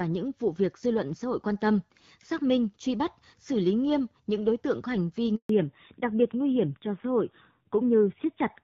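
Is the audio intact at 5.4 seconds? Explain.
No. At 5.4 seconds the sound has dropped out in a handover gap that runs from 5.35 to 5.49 s, about 140 ms of silence. The speech fades away within a few tens of milliseconds and nothing returns until the new link is up. This happens when the phone moves the call from one network to another and no speech frames arrive during the switch, so whatever was said in that window is lost.

Right after, at 5.49 s, the audio returns duller and rougher, with nothing above 4 kHz through to the end of the clip. This is a fallback to narrowband. Before the gap the call was running as HD Voice on the AMR wideband codec, at a quality that fits about 12.65 kbit/s and with only light coding damage. The new link likely carries it on narrowband AMR, around 7.4 kbit/s, which cuts off all the upper band that wideband had kept.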